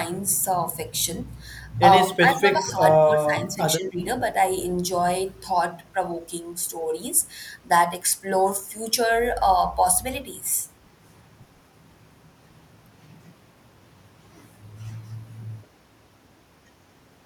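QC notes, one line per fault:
2.07–2.80 s, 2.96–3.59 s and 3.77–4.00 s: speech suppressed in double talk. The speech dips in three bursts, by about 10 dB, then about 20 dB at its deepest, then about 10 dB. On the waveform the envelope pinches in abruptly. The likely cause is an echo canceller failing to separate the near-end talker from overlapping far-end echo and attenuating the near-end talker.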